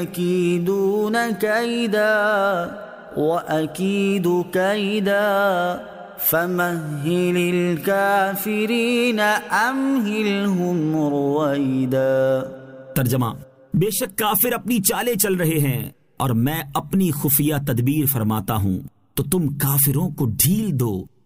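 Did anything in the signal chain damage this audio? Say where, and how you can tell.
No, nothing in the chain audibly damaged this audio.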